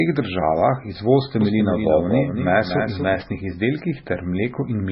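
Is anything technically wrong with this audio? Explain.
Yes. MP3 compression, heavy and present for the whole clip, is likely the cause of the dull, watery character. Nothing reaches above about 5.6 kHz, which fits a very low bitrate near 16 kbps. Short of bits, the encoder cuts the top off the spectrum and drops weak frequency components. Those components blink in and out from frame to frame, so the speech swirls, sibilants turn metallic and chirpy, and consonant onsets smear.

A doubled audio track runs from 1.41 to 3.21 s. A second full-band copy of the speech trails the original by roughly a fifth of a second and sits about 5 dB quieter. The likely cause is the same signal reaching the mix twice, through a slower second path or a misaligned edit. It sounds like a clean, dry echo with no room decay. It cuts in and out abruptly at those two times.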